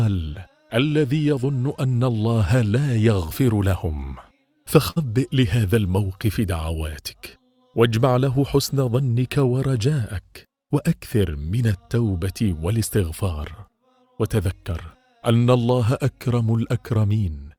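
Throughout the clip there is clock drift between sender and receiver. The sender's clock runs roughly 5 percent slow compared with the receiver's, so audio arrives slightly too slowly and the jitter buffer steadily drains. Unlike a single dropout, this causes a constant background strain on timing.

From 0.12 s to 17.45 s, repeated timing corrections follow from that drift. The receiver keeps padding short pieces, playing at about 96 percent of normal speed and adding something like 0.7 s overall. This is heard as slight, unevenly spaced hiccups and a faintly dragging tempo, all in the same direction, not as a steady pitch drop.

At 4.90 s to 4.98 s, a short stall from a late packet occurs when the buffer runs empty. The receiver holds the last sound for 58 ms and then resumes exactly where it left off, with nothing missing. It is heard as one sound held too long, with a slight buzz or dip, and unlike a dropout it leaves no gap.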